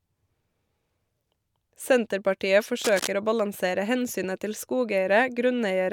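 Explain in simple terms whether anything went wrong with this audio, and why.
Cable scratch noise appears from 2.81 to 3.07 s as a loud, crackly rustle over the speech. A moved, worn cable or plug is the likely cause.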